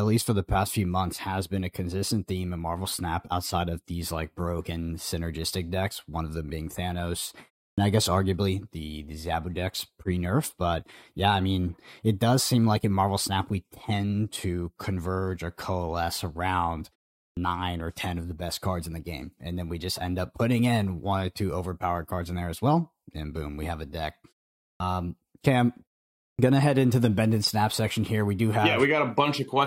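Clipped start after a pause occurs at 7.73, 17.32, 24.75 and 26.34 s. Each time, 47 to 52 ms of sound is lost. The output device sleeps during pauses of 0.31 to 0.54 s and wakes late. Speech resumes abruptly, as at "I guess arguably the".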